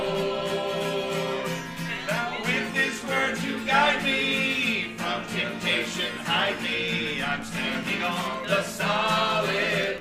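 From 7.14 s to the end, Wi-Fi interference adds a faint ticking, well below the signal, as a nearby radio's beacon every 102.4 ms is rectified by the audio circuit. About ten ticks a second sets it apart from the faster, buzzier pulsing of GSM phone interference.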